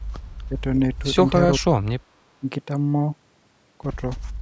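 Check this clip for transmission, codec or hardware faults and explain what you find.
The speech is briefly pulled down three times, at 0.49–0.62 s, 1.58–1.65 s and 2.40–2.44 s, most likely speech suppressed in double talk. An echo canceller that can't tell its own talker from loudspeaker echo attenuates both. The first dip is slight, the third moderate, and the second deep, around 30 dB, almost a cut-out. On a waveform these are short notches in the envelope. A spectrogram shows brief vertical gaps, darkest at 1.6 s.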